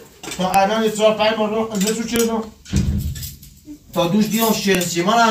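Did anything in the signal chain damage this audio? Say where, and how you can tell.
Yes. At the storage stage, separate WAV pieces were joined without stripping their headers, so a file header played as audio. The header bytes become raw samples, heard as sharp, loud clicks at 0.54, 2.16 and 4.75 s, unrelated to the surrounding signal.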